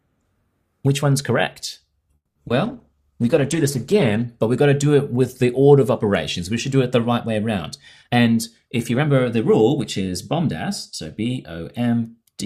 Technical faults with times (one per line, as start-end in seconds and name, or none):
2.15-2.37 call audio freeze
2.47-2.50 short concealed packet loss
2.66-4.32 call bitrate drop
8.03-11.07 jitter buffer speed-up